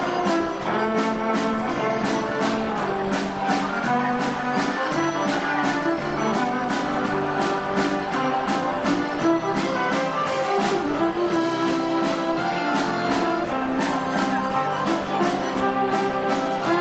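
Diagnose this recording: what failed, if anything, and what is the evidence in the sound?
Nothing has failed here: the recording simply carries the ordinary marks of a call, with the top end stopping around 8 kHz as you'd expect from a wideband call codec, and nothing in the sound calls for a fix.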